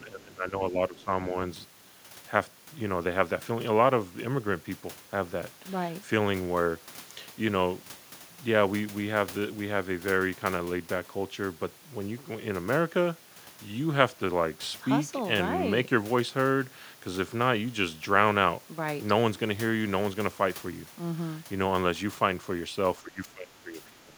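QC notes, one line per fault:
0.0–1.1 s and 23.02–24.14 s, speech suppressed in double talk: in both stretches the talker's level sinks, dropping by around 15 dB at its deepest, with roughly a second of sound affected each time, at the very start and again at the very end of the clip. The likely cause is the echo canceller. The far side was playing on the loudspeaker while this side talked, and the canceller could not tell its own talker apart from the loudspeaker echo, so it pulled both down together.
0.98–1.04 s, other side's voice leaking through: a brief scrap of a second voice, sitting around 35 dB below the talker, slips in near the end of the first suppressed stretch and lasts about 60 ms. This is likely loudspeaker sound from the far end that the echo canceller failed to strip fully from the microphone signal, so a residue of it passes into the recording alongside the local talker.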